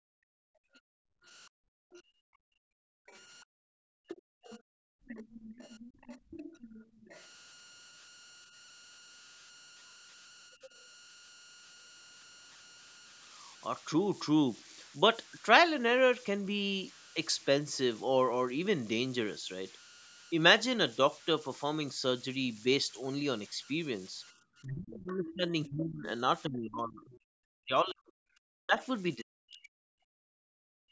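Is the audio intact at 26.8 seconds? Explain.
No. Converter idle tones run through the whole clip, including 26.8 s: an undithered delta-sigma converter settles into repeating bit patterns on quiet input, giving a whistle near 1.5 kHz at about 23 dB below the speech. On a spectrogram it shows as a thin steady horizontal line.

Speech suppressed in double talk covers 24.63 to 30.07 s, most likely because both sides spoke at once and the echo canceller pulled down the talker along with the echo. The voice dips by as much as roughly 40 dB and is affected for about 4 s in total, seen as gaps and collapsed stretches in the waveform envelope.

The other side's voice leaking through appears from 25.28 to 27.19 s, likely loudspeaker sound that the echo canceller left in the microphone signal. It is a second voice roughly 20 dB under the talker, visible as fainter harmonic traces beneath the main speech.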